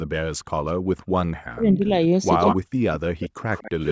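From 0.00 to 0.13 s and again from 0.37 to 1.18 s, the background is gated by the echo canceller: while far-end audio plays, the microphone path is pulled down by about 40 dB, so the room sound drops out and then returns once the canceller releases.

Between 1.49 and 1.91 s the speech itself dips very deeply, most likely speech suppressed in double talk, with the canceller attenuating the near talker because both sides are active at once.

At 2.40 to 2.56 s an echo leak appears: a copy of the speech 151 ms late, fairly close in level to the original, likely residual loudspeaker pickup the canceller failed to remove. It overlaps a second short suppression at 2.52 to 2.67 s, again a deep cut, likely from double talk.

From 2.95 s to the end the 151 ms echo returns, weaker and sustained. Within that stretch, from 3.09 to 3.46 s, the background is gated once more by about 40 dB.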